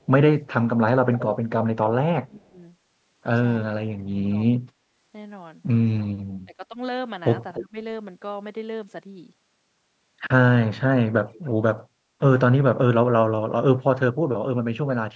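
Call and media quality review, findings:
Echo leak: delayed copy of the speech trailing by roughly 0.3 s. 1.15–2.38 s: the longest stretch, 306 ms behind, about 15 dB under the main speech. 7.54–7.64 s: short scrap at 295 ms, louder, about 10 dB down. 11.77–11.81 s: faint blip at 295 ms, about 35 dB down. The steady 0.3 s delay points to the same path each time: likely a loudspeaker-side echo canceller not fully removing its mic pickup, so the residue gets sent back.

Speech suppressed in double talk: level dips in the main speech while the other side is talking. 2.18–2.6 s: drop of roughly 25 dB, overlapping the tail of the first echo. 3.61–4.49 s: again around 25 dB, about half a second of it chewed up. 6.45–7.77 s: shallower, around 15 dB, half a second total. 11.06–11.43 s: about 20 dB, roughly 0.2 s. Likely the echo canceller can't separate its own talker from the far-end echo during overlap, so it ducks both.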